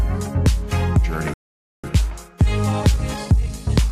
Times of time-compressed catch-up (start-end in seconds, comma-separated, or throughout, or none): 1.84-3.92